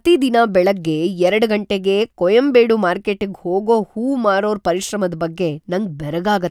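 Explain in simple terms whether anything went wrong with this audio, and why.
Nothing went wrong with it.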